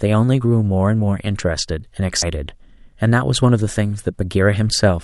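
At 2.22 s the speech breaks into a brief glitch. This is damaged data in a compressed stream. Part of the encoded stream is corrupt. The decoder misreads that frame and loses sync. It then searches for the next valid header before decoding resumes.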